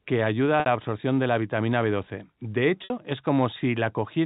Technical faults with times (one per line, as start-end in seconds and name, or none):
0.60-0.66 packet loss with pitch repetition
2.84-2.90 packet loss with pitch repetition